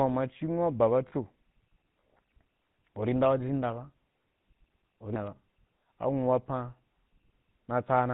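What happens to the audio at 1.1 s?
Lost GSM frames hit at 1.08 to 1.13 s, right after "anwu’a ba". The decoder hides a 40 ms gap, which points to about two missing 20 ms frames, by reusing the vocal-tract and excitation settings of the last good frame. The result is a brief, rough, metallic ring that holds the preceding sound instead of a clean continuation. The gap is short, so it never fades to full silence.

Underneath, as everywhere in the clip, the GSM full-rate codec at 13 kbps is plainly audible. It rebuilds the voice from a vocal-tract model driven by regularly spaced pulses, keeping only a thinned-out excitation, and passes nothing above 4 kHz. That gives the sound its buzzy, gravelly roughness and dull top end, which carry through the dropout.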